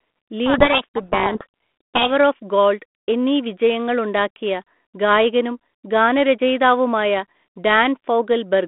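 Harsh, grinding distortion buries the speech from 0.46 to 2.11 s, clearing just before "ഓഫ് ഗോൾഡ് എന്നീ വിജയങ്ങൾ". This is a codec payload misread. The receiving end unpacks the G.726 code words with their bits in the wrong order, so each sample's difference value is decoded wrongly until both sides agree again. The speech runs over a 32 kbit/s G.726 ADPCM telephone link limited to about 200 Hz to 3.5 kHz, which adds only light coding noise.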